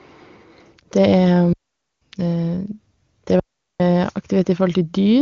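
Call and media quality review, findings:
Digital wireless dropout, 1.53 to 2.02 s (about 0.49 s) and 3.39 to 3.80 s (about 0.41 s). Speech cut to near silence, fast fade, clean edges. Probable component: digital wireless receiver muting after excess data loss. Distinguishing cue: no noise burst before or after, unlike analogue RF squelch. No smeared or repeated fill, unlike packet-loss concealment. AMR-WB audio at 23.85 kbit/s is clear on both sides of each hole.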